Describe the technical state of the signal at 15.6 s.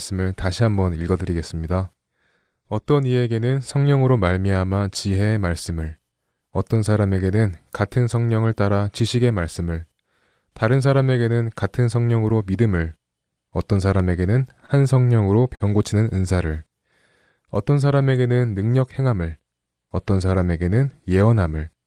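A late packet left the jitter buffer empty, causing a short stall from 15.55 to 15.63 s: the receiver held the last sound for about 50 ms and then resumed where it stopped. Nothing is lost, but the speech drags slightly, with a slight buzz or dip, and runs 50 ms later afterwards.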